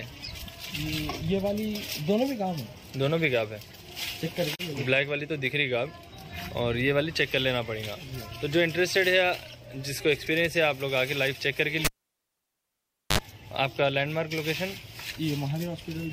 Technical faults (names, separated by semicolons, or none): digital broadcast dropout; cable pulled and plugged in